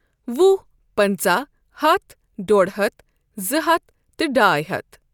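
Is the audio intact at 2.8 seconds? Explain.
Yes, at 2.8 seconds the speech plays through intact, with no dropout, click, distortion or other fault at that moment.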